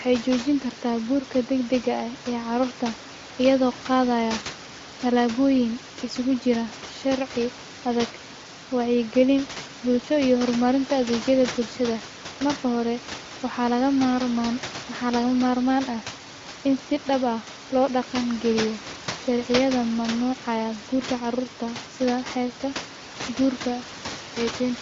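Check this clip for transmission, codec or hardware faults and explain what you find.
No transmission, codec or hardware faults can be heard in the speech. Room noise sits about 15 dB below the talker, and the audio carries the band-limited sound of AMR wideband (HD Voice) at a rate that fits 23.05 kbit/s, with nothing above about 7.5 kHz.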